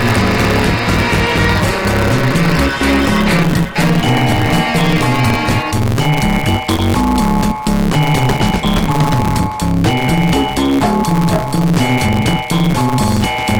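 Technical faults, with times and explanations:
Throughout, block size mismatch (truncated): one stage writes longer blocks than the next reads, which fits 512-sample blocks, so each block's tail is discarded. The repeated cuts make a buzz at about 138 Hz, the block rate, and the audio runs 1.6 times fast at roughly normal pitch.
6.76 to 6.79 s, short concealed packet loss: about 20 ms of audio never arrived in time, so the receiver extended the preceding sound for 23 ms and then blended back into the real signal, leaving a brief smear at that point.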